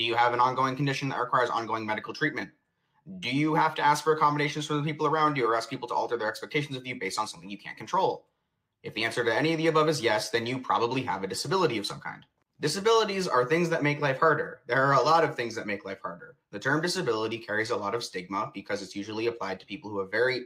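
At 16.21 s, running through to 16.53 s, there's sound cut by the noise suppressor. It misread part of the signal as background noise and pulled it down harder than everything around it, by about 12 dB at the deepest point. Only around 150 ms of that window is actually hit, so what you notice is a short dip where the level sags and then springs back, rather than a clean dropout.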